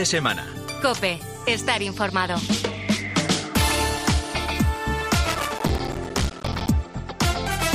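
Processor overload crackle runs from 5.30 to 6.69 s. Across that stretch the processing could not keep up, and buffer after buffer missed its deadline, roughly a hundred of them in quick succession. Each miss drops in a brief hole of silence, around 5 ms long, with abrupt edges on either side. Packed this densely, the holes fuse into a gritty, tearing crackle laid over the sound, which stops once the load eases.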